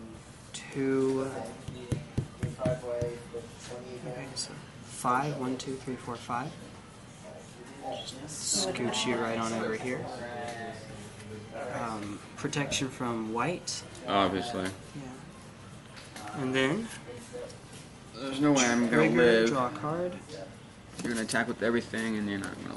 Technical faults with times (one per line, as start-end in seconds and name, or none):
none